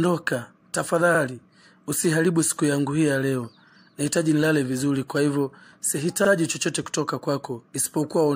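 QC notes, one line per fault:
1.15–1.20 s and 6.25–6.30 s, overlapping chunks: at each of these two joins a 50 ms stretch plays twice, heard as a brief stutter or click. Each chunk of about 2.5 s starts before the previous one has finished.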